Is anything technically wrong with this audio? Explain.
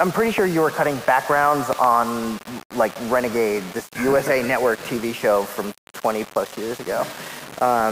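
Yes, there are two problems. Throughout the clip there is low bit depth without dither. The error sits roughly 20 dB below the signal and is likely from rounding to about 5 bits, so quiet passages turn gritty and sputter. On a spectrogram, the distortion appears as harmonic smearing that tracks the sound. On a waveform, it shows as visible staircase steps.

At 0.38 to 0.40 s there is a loud pop, a sharp click well above the sound, likely from an electrical transient. From 1.73 to 1.86 s, two more pops follow in quick succession, a little quieter. Each shows as a tall spike on the waveform and as a thin vertical broadband line on a spectrogram, with the sound continuing underneath.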